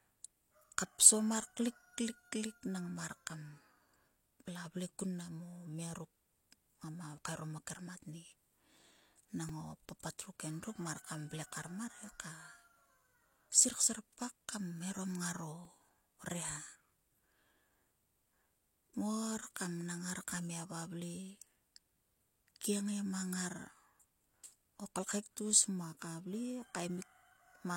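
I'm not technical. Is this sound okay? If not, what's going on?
No, there are two tiny glitches in this speech, at 9.49 s and 15.65 s. Both are a repeated buffer: the audio arrived late, so a sliver about 3 ms long got replayed, making a quick click or brief buzz.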